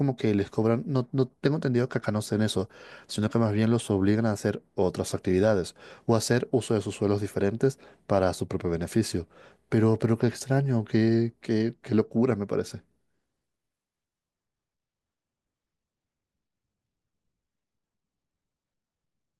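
A speech recording with no technical faults to report. Nothing in the audio calls for a time, a value or a cause.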